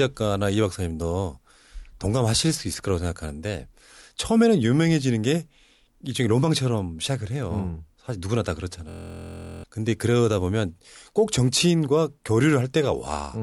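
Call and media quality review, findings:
System hang loop, 8.89–9.64 s: a steady buzz at 43.1 Hz replaces the speech. One 23.22 ms slice repeats exactly, which fits a 1024-sample ring buffer replayed while the driver or host stalled. Roughly 0.7 s is lost. Unlike mains hum, the buzz is a looped slice of the speech itself.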